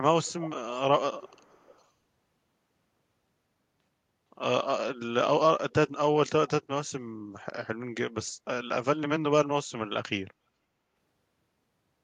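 Right at the start the speech picks up an echo leak: a faint delayed copy trails by about 450 ms at 0.23–0.5 s, 0.75–0.82 s and 1.2–1.85 s, fading weaker each time. Likely a speakerphone whose echo canceller let some of the far end's audio slip back.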